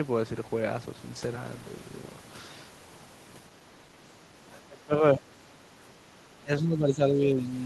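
From 4.6 to 5.44 s the speech sinks by roughly 25 dB, then dips briefly at 5.98 s and more gently, around 10 dB, from 6.41 to 7.45 s. This is speech suppressed in double talk, likely an echo canceller turning down the talker while the far side spoke. The level ducks during these spans.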